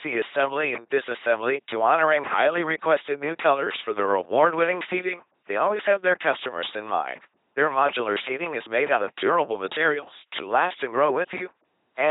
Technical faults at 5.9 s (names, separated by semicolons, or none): LPC-10 vocoder